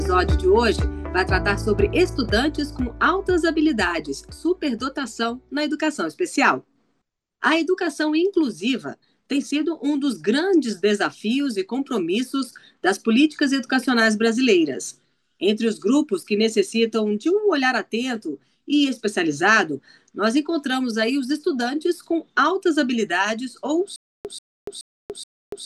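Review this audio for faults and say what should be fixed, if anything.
The player or stream likely stalled near the end, and at each retry it replayed the last fragment it still held before running empty again. From 23.96 s to the end, this comes through as a stutter with silent gaps. The same 136.6 ms burst of sound repeats four times at an even period of 425 ms, with 288 ms of digital silence between repeats. The audio that belonged in that stretch never plays. To prevent this, keep enough buffered audio ahead of playback, and on an underrun output silence rather than looping the stale fragment.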